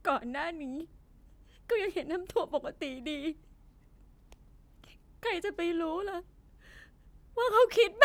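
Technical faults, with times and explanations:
Listening through the speech, nothing stood out as a technical problem at any point.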